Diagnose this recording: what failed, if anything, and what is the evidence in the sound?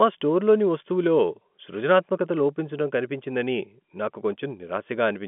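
Nothing failed: the speech sits in a telephone band of about 200 Hz to 3.4 kHz with nothing above 3.7 kHz, which fits an ordinary G.711 A-law line working as intended, and no stage shows a failure.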